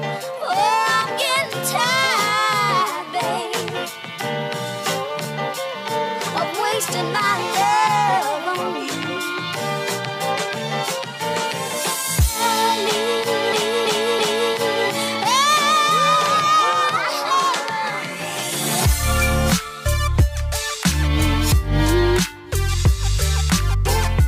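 Nothing to report on this one: no technical faults audible anywhere in the audio.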